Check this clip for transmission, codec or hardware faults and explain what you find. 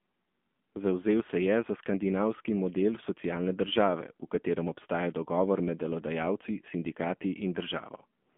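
A codec fault runs throughout: the speech passed through the AMR narrowband mobile codec, at a low mode consistent with about 7.4 kbps. Nothing reaches above 3.5 kHz, the telephone band sits near 200 Hz to 3.4 kHz, and the sparse pulse-driven vocal-tract model leaves the voice audibly buzzy and synthetic.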